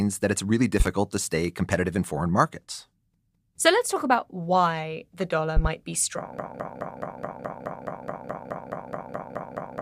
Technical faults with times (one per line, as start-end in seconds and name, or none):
0.80-0.89 loud pop
5.57-5.68 loud pop
6.39-9.81 broken-record loop